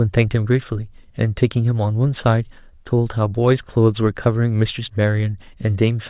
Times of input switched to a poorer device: none

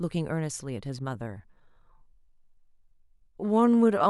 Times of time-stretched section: 1.09-4.09

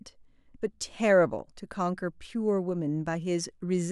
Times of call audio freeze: none

